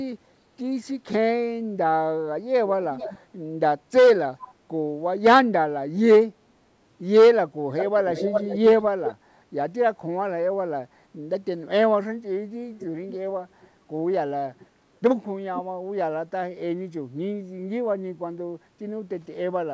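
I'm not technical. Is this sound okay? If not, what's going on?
No. This sounds like an echo leak, likely from someone on the call using a loudspeaker whose echo cancelling didn't catch everything, so their microphone sent the voice back. You hear a delayed copy of the speech, about 0.4 to 0.45 seconds behind, at 2.91–3.19, 4.41–4.54, 7.77–9.15, 12.78–13.14, 13.61–13.68 and 14.59–14.66 seconds. It is loudest and longest at 7.77–9.15 and barely audible at 13.61 and 14.59.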